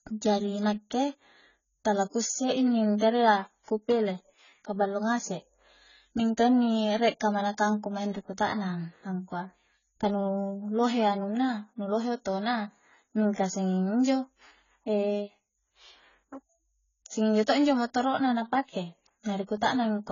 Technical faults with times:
0.00-20.12 AAC compression

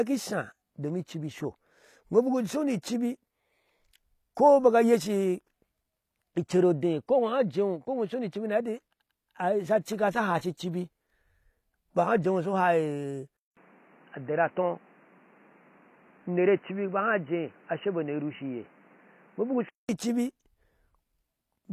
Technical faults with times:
0.00-21.73 HE-AAC compression
13.37-19.89 input switched to a poorer device

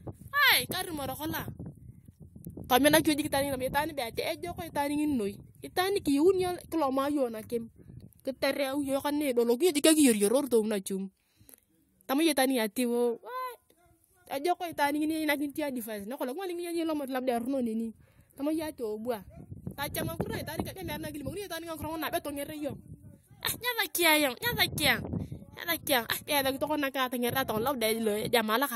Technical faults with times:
20.74 damaged data in a compressed stream

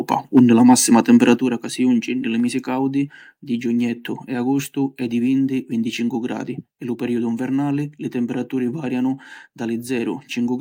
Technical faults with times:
0.13-0.39 microphone overload
0.39 microphone volume stepped down
0.68-1.30 microphone overload
1.38 microphone volume stepped down

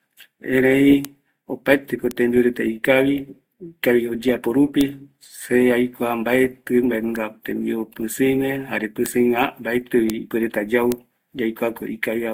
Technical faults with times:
0.00-12.33 transcoding between lossy codecs
1.05 bit error spike
2.11 bit error spike
4.81 bit error spike
7.16 bit error spike
9.06 bit error spike
10.10 bit error spike
10.92 bit error spike

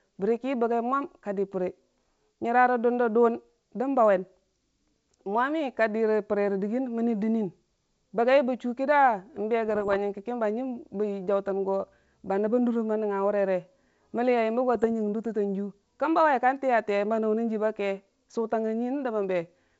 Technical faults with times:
9.68-9.96 bit errors on an ADPCM link
14.75-14.85 bit errors on an ADPCM link

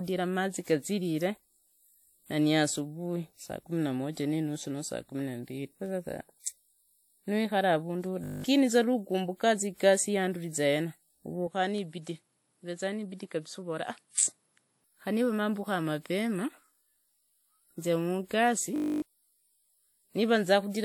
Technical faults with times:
8.24-8.44 system hang loop
11.47-14.84 input switched to a poorer device
18.76-19.02 system hang loop

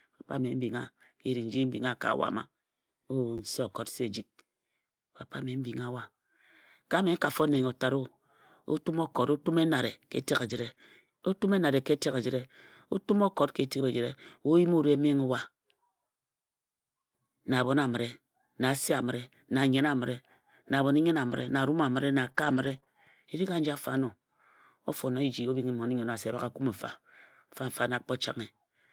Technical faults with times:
3.38-3.40 repeated buffer
7.54-7.64 lost packet rebuilt from error correction
10.46-10.84 lost packet rebuilt from error correction
10.74-10.78 short concealed packet loss
21.32-25.54 scattered short gaps

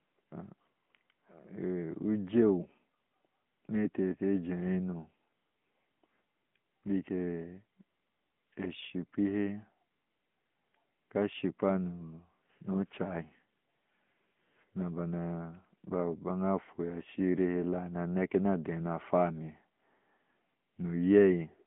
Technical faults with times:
0.00-21.66 AMR narrowband mobile codec

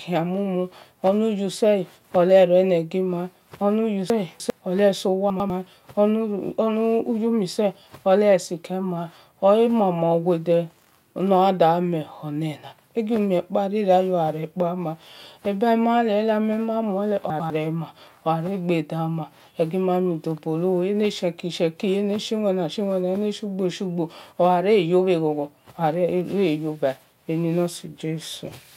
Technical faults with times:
4.10-4.50 chunks out of order
5.30-5.50 chunks out of order
17.30-17.50 chunks out of order

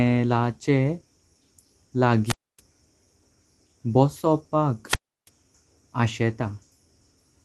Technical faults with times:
2.25-2.60 wireless microphone squelch dropout
4.87-5.29 wireless microphone squelch dropout

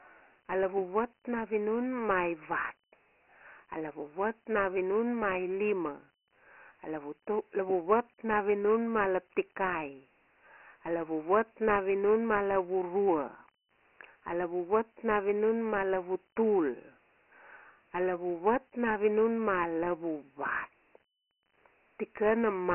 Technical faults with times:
0.00-22.75 Dialogic VOX ADPCM

